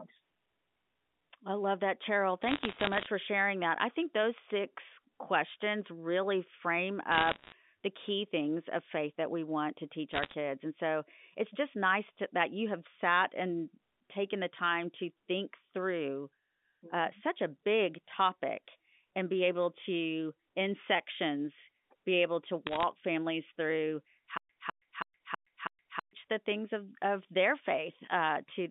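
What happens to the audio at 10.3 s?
Bit errors on a digital phone line crackle through the speech from 10.14 to 10.34 s. About one bit in a hundred flips, each corrupting a single sample. The waveform shows isolated one-sample spikes, and the spectrogram shows thin vertical lines across the 200 Hz to 3.6 kHz line band.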